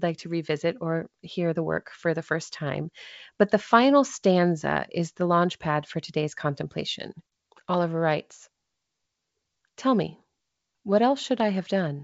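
No technical faults can be heard anywhere in the speech. The G.722 wideband telephone coding reaches up to about 7 kHz with at most a faint upper-band hiss, which fits the full 64 kbit/s mode.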